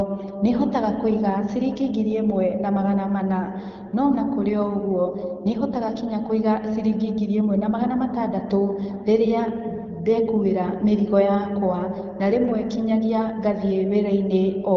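No technical faults are audible.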